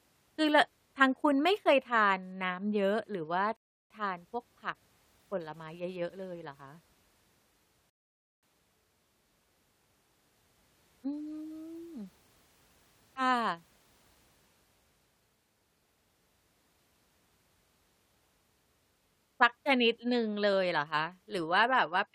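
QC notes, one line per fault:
3.57 to 3.90 s and 7.90 to 8.43 s, rebuffering stall: the player twice drained its downloaded audio and paused until more data arrived. The speech drops to silence for 0.34 s, then 0.53 s, and resumes exactly where it stopped, with nothing skipped but time added.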